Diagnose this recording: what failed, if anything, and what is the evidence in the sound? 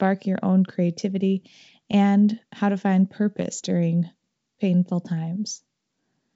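Nothing failed; no fault is audible in this speech.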